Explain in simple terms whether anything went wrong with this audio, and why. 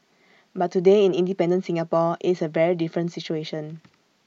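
Nothing went wrong here: the speech comes through intact, with no audible faults at any point in the recording.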